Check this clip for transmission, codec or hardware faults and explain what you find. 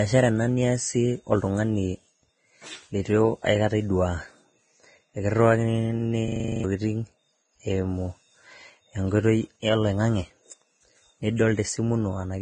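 Two faults are audible in this speech clip: codec damage throughout, and one hang loop.

Vorbis compression, throughout: the speech sounds hissy and grainy, with heavy damage and nothing above 9.7 kHz. This is likely a low-bitrate Vorbis encode, which fits roughly 23 kbps. The treble was cut off and the remaining detail quantised so coarsely that it turns into noise.

System hang loop, 6.28 to 6.64 s: a 40 ms fragment repeats nine times at 25 Hz, giving a rapid mechanical stutter. The system froze while the sound hardware kept replaying the same ring buffer, so around 0.4 s of audio is missing.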